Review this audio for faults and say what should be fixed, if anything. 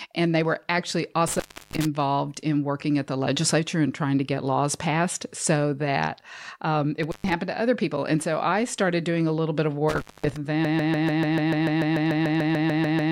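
Three dropouts here that sound like an intermittent contact. The first runs 1.27 to 1.85 s, right after "they were actually" and before "in working at the", with the signal gone for about a third of a second. The second, 7.03 to 7.33 s, sits between "so that um it" and "to other people", open for roughly 0.13 s. The third starts at 9.89 s after "a little bit of" and ends at 10.37 s, open about 0.23 s. Each one has crackle at the edges and a faint hiss underneath, which is what a plug or cable lead briefly losing contact sounds like. Reseat or replace the suspect cable and strain-relieve the connectors before the next take.

Then from 10.65 s to the very end there's a broken-record loop. A 146 ms fragment repeats exactly, back to back, 17 times, and whatever should have played in those last couple of seconds is simply gone. That's likely a stall in the player, encoder or stream that kept pushing out the last chunk it held. 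Re-export or re-capture that tail from the source, and keep an eye on buffer and stream health so a stall can't freeze the output like that.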